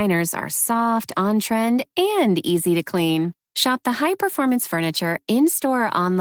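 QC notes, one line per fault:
Throughout: Opus voice compression, plainly audible. Speech sounds hoarse and slightly robotic because the excitation is coded coarsely, which points to roughly 16 kbps. Top end stays present, consistent with hybrid mode: SILK below 8 kHz, CELT above.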